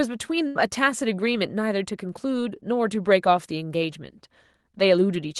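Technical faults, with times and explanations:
0.47 to 0.57 s, burst of packet loss: roughly 80 ms of speech never arrives, and the receiver covers the hole by extending the last sound for about 77 ms while fading it, so a smeared buzz or hiss replaces silence. Unlike a plain dropout to zero, the gap is filled with a stretched, decaying echo of what came before, and speech resumes further along rather than picking up where it stopped, through a call codec whose top end stops near 12 kHz.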